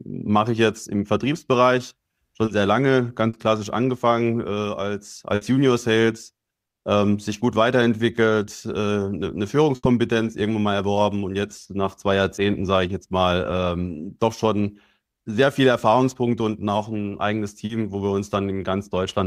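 Short concealed packet loss at 2.45 s and 3.29 s: about 20 ms and 40 ms failed to arrive in time, and the decoder extrapolated the preceding sound, leaving a brief smear. A burst of packet loss follows at 5.35 s and 9.75 s: 60 ms and 80 ms are lost, bridged by a held, fading continuation before the audio resumes with that stretch missing. Further short concealed losses of 20 ms at 12.35 s and 40 ms at 17.65 s produce the same momentary wobble.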